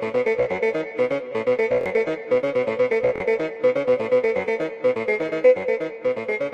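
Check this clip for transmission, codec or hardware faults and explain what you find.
There's one fault here, a repeated buffer, and it shows up twice: from 1.81 to 1.86 s and from 3.16 to 3.20 s. Each time, fresh audio didn't reach the device in time, so it replayed its last block of about 23 ms, which fits a 1024-sample buffer, two extra times. You hear a quick stuttering buzz with hard joins, and roughly 50 ms of real sound goes missing at each spot.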